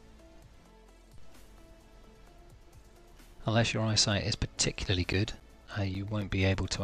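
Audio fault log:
4.58–6.22 s, CD scratch ticks: a surface blemish defeats error correction once per disc turn, so the player patches the gap, producing seven ticks, each up to around 10 ms.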